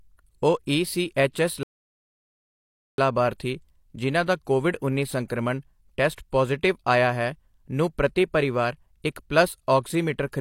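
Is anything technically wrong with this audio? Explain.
Yes, there are two kinds of fault in this speech.

Pre-echo appears at 1.33 to 1.35 s, 6.16 s and 10.32 s: a brief hiss precedes a sharp onset, blurring it. The codec spread quantisation noise across a block, ahead of the attack.

A playback stall runs from 1.63 to 2.98 s: the speech cuts to silence for about 1.35 s, then resumes. The player likely ran short of data or was blocked.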